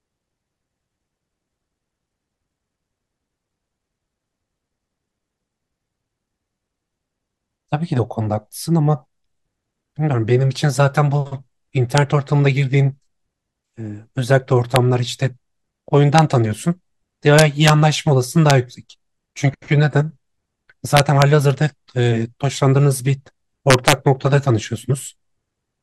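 Integer overflow cracks the speech at 11.98, 14.76, 16.19, 17.39–17.69, 18.50, 20.97–21.22 and 23.70–23.93 s. Peaks exceeding the integer limit, by up to about 3 dB, wrap to the opposite sign instead of flattening, giving violent snaps far harsher than clipping's buzzy distortion.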